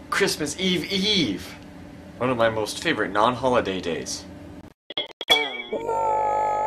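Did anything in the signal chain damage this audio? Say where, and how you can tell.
Yes. There's a bit error spike at 2.41 s: a single-sample tick, sharp and broadband, from one flipped bit in storage or on a digital link.

There's also a digital broadcast dropout from 4.61 to 5.29 s. The receiver muted in several short holes, the longest 96 ms and about 360 ms in total, which fits roughly fifteen failed frames.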